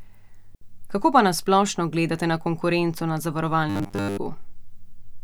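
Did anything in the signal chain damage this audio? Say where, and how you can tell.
Yes. The wireless link failed first: a digital wireless dropout at 0.55 to 0.62 s, where the receiver lost too much data and muted for about 67 ms. It is a clean gap of near silence with no noise burst on either side.

At 3.70 to 4.18 s, just after "gledate na konkurenco na", the speech turns into a rigid, metallic 100 Hz buzz. This is likely robotic sound from repeated short buffers at the driver or buffer stage. Audio arrived too seldom and the last 10 ms block was replayed while roughly two-thirds of the real audio was skipped.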